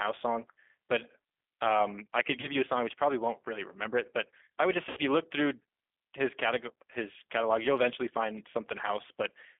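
A speech recording carried over a G.729 codec line. Its band runs only from about 150 Hz to 3.5 kHz, and the voice has the plainly audible rough, slightly synthetic texture of a low-rate model-based speech coder, which fits an 8 kbit/s G.729A link. VoIP packet loss concealed by the speech codec occurs at 2.41 to 2.48 s and 4.89 to 4.99 s, with about 20 ms and 80 ms of audio missing. In each gap the decoder extends the last pitch and filter into a fading buzzy tone or coloured noise, and the voice stays weak or distorted until the decoder state recovers.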